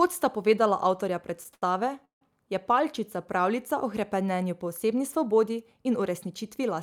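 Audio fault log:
1.54–1.63 s: short stall from a late packet. The speech hangs on one sound for about 80 ms, stretched with a slight buzz or dip, then carries on exactly where it left off, so nothing is lost and everything after runs 80 ms later. A packet arrived late, the jitter buffer emptied, and the receiver padded with the last sound. What separates this from a freeze is its brevity: the held sound never fades to silence.
2.05–2.22 s: call audio freeze. The last sound is carried briefly, then decays into about 130 ms of silence, making a gap of roughly 163 ms before the speech resumes at the same point with nothing skipped. This likely comes from packets delayed in transit that drained the jitter buffer for longer than the receiver could convincingly extend the sound. The audible drop to silence is what marks it as a freeze rather than a short stall.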